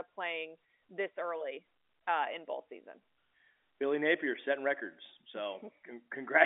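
No faults detected; the speech sits in a normal telephone band of about 250 Hz to 3.6 kHz, with nothing above 3.8 kHz, consistent with 64 kbps A-law line coding.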